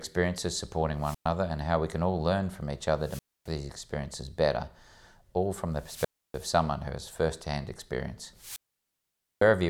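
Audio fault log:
0.98 to 9.47 s, wireless microphone squelch dropout, four times: 0.98–1.29 s before "and how we can", 3.00–3.51 s after "all learn from each", 5.72–6.49 s after "all from", and 8.34–9.47 s. Each time the radio link fades and hiss rises until the receiver's squelch mutes the output, leaving silent gaps of 0.11, 0.27, 0.30 and 0.85 s.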